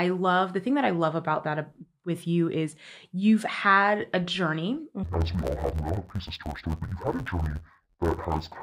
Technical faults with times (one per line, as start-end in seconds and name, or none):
5.03-8.63 interleaved audio read as planar